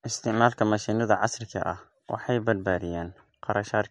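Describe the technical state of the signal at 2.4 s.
At 2.4 s, as throughout the clip, nothing sounds above 11.2 kHz and the speech has a watery, swirling texture, likely MP3 compression at a low bitrate near 56 kbps.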